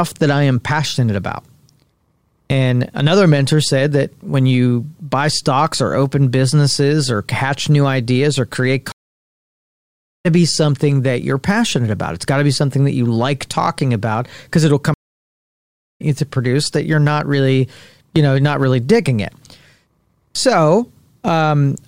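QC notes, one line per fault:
8.92–10.26 s and 14.94–16.02 s, stream reconnect: after "new ideas or create" and after "talking about because it'll", the audio drops to silence for 1.33 s and 1.06 s. A new decoder then picks up the live stream about a second and somewhat under a second further on, at "be something that you're" and "you produce that you're", so speech is skipped. The waveform shows flat gaps, and the spectrogram shows blank columns followed by a fade-in.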